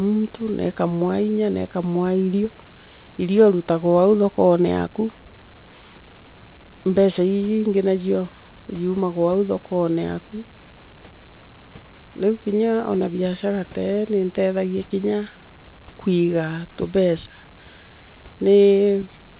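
A speech recording with nothing technically wrong with it, carried over a call link whose G.711 A-law coding leaves nothing above 4 kHz.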